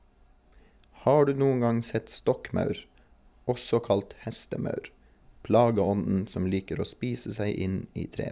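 Speech recording with no audible technical faults anywhere in it.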